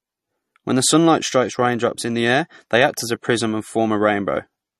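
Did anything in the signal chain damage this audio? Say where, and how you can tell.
Yes: a low-bitrate lossy codec, likely MP3 near 40 kbps, stripped everything above 14.1 kHz throughout, leaving speech audibly watery, with swirling sibilants and smeared onsets.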